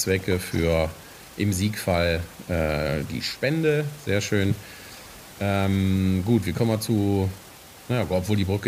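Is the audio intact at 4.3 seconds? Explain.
Yes, the speech at 4.3 seconds is intact, with only the room's own background noise audible about 21 dB beneath it, which is part of the recording rather than a fault.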